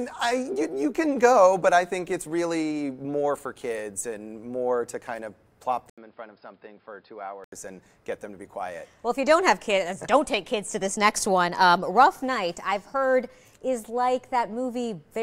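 At 5.90 s the sound cuts out for 80 ms, then returns dull and boxy, with nothing above 5.2 kHz, a little quieter, and sitting on faint background noise that wasn't there before. At 7.52 s it clears up again. This is most likely an input switched to a poorer device. A plain filter or EQ change would narrow the band without the short gap, the level drop and the different noise floor arriving together.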